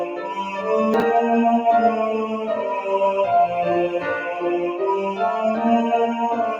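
A noise suppressor applied to music or sounds stays active through the whole clip. Built for speech, it treats steady tones and tails as noise. Its gain swings by roughly 5 dB, so held sound sinks and pumps while attacks come through.

From 0.05 to 0.25 s, the noise suppressor cuts this sound harder than the rest. The level drops by about 5 dB at its deepest. Sustained and decaying parts thin out and fade early.

At 0.94 to 1.02 s, chunks play out of order. The sound points to a 20 ms chunk arriving three chunks late and playing after the audio that should follow it. Nothing is missing, but the moment sounds jumbled, with three hard joins.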